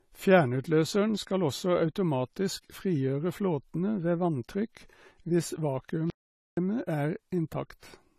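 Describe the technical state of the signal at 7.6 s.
At 7.6 s the speech shows low-bitrate audio saved at a high bitrate, a condition that runs through the whole clip. Nothing is present above 14 kHz. This points to an earlier low-bitrate encode, one that fits roughly 32 kbit/s AAC. The likely cause is that this encode was later re-saved as a high-rate MP3. The larger file cannot restore what the first codec discarded, so the earlier artefacts and the cut-off remain.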